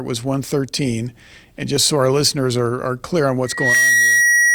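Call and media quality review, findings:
Audio missing between chunks: two brief skips at 1.77 s and 3.75 s, about 2 s apart, each losing a short slice of around 20 ms with the edges butted together and no silence. Likely component: capture or processing buffer dropping samples at each 2 s chunk boundary. Waveform shows an abrupt step discontinuity at each splice, with no flat gap. Spectrogram shows a thin vertical broadband line at each point.

Loudspeaker feedback squeal: a single 1.9 kHz tone from 3.45 s to the end, swelling over about 0.3 s to roughly 5 dB above the speech. Component: acoustic loop, mic picking up its own loudspeaker, with loop gain above unity at 1.9 kHz. Spectrogram shows a bright, steady horizontal line at 1.9 kHz that thickens as it grows. Waveform shows a rising sinusoidal envelope riding over the speech.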